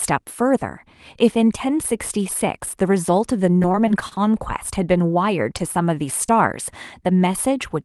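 A speech recording carried over a call link, with the band topping out around 12 kHz as the Opus codec at roughly 32 kbps would give, and three packet-delivery faults. From 3.57 to 4.19 s the voice turns choppy, with bits of sound missing. This is repeated packet loss. A string of short holes, the longest about 33 ms, arrived one after another. The receiver patched each by extending the preceding sound, so roughly 0.13 s of that stretch is synthetic fill and about 60 ms of real audio never comes back. That works out to around a fifth of the span being concealment rather than speech. Between 5.58 and 5.62 s a sound is held a touch too long, with a slight buzzy sustain before things carry on. This is a short stall from a late packet. The jitter buffer ran dry while waiting, so the receiver stretched the last sound by about 16 ms until the packet turned up, then resumed from the same point. 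Nothing is lost, but playback now runs about 16 ms further behind. From 6.26 to 6.30 s there is a brief smear or wobble, a short concealed packet loss. Around 20 ms of audio failed to reach the decoder in time, and the receiver filled roughly 24 ms by continuing the preceding sound before blending back into the real signal.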